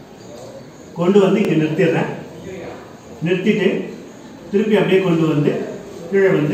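Overlapping chunks appear at 1.45–1.47 s and 3.97–4.00 s, 2.5 s apart. Each new chunk starts about 25 ms before the previous one ends, so that slice of audio plays twice at the join, which is heard as a brief click-like stutter.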